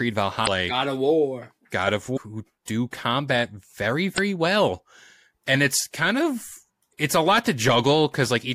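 Damaged data in a compressed stream makes the decoder lose frame sync, leaving short glitches near 0.43, 2.13 (before "who do combat"), 4.14 and 6.89 seconds.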